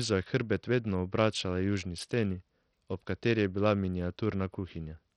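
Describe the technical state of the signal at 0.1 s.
At 0.1 s the speech carries heavy codec damage that runs through the whole clip. The likely cause is Bluetooth SBC compression at a low rate, fitting roughly 64 kbps. Starved top sub-bands lose their bits, so treble drops and flickers. Coarse quantisation leaves gritty noise and aliasing on the sound.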